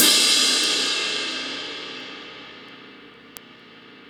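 From 0.18 s to 4.05 s, word clock ticks run through the sound. Around twenty sharp clicks arrive roughly every fifth of a second, some louder than others. The receiving device's clock is not locked to the sender's, drifting by around 100 parts per million. Each slip drops or repeats a single sample.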